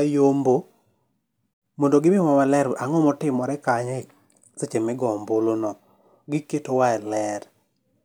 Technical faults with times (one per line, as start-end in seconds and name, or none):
none